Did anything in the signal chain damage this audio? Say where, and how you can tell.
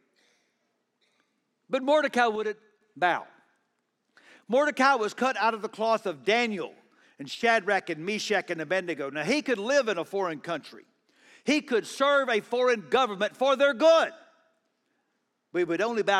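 Yes. One channel drops out from 2.36 to 2.81 s and again from 7.35 to 7.43 s. The speech level falls abruptly by about 6 dB, which is what a mono sum does when one side goes silent. The cause is likely intermittent analogue wiring on one channel.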